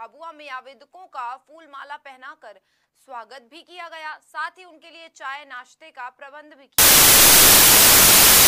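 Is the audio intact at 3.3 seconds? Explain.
Yes, the audio is intact at 3.3 seconds, with no dropout, click, distortion or other fault audible at that moment.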